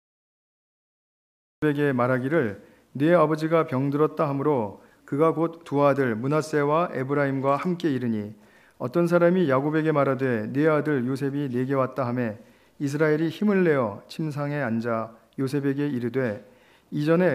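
The first 1.62 s is digital silence, then the audio bursts in mid-sound: a cut-off start, where capture began late and missed the sound's beginning. Unlike a fade-in or a natural pause before onset, there is no attack, only an abrupt entry.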